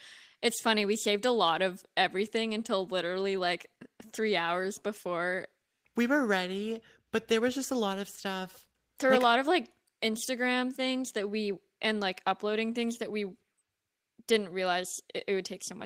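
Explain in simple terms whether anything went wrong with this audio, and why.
Nothing went wrong here: no faults can be heard anywhere in the speech recording.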